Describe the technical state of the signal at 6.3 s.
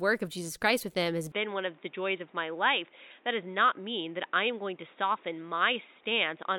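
The input has likely switched to a poorer device, from 1.32 s to the end: speech now stops near 3.8 kHz, sounding dull and boxy over a faint new noise floor.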